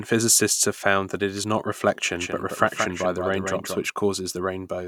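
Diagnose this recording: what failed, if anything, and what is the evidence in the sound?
The capture or edit chain has most likely fed the same signal in twice, through a second, slower path or two misaligned copies, producing a doubled audio track from 2.14 s to 3.88 s, right after "that it is not". A full-band copy trails the original by about a fifth of a second, a few decibels quieter, with no decay or room colour. It begins and ends abruptly, giving a hard, dry echo.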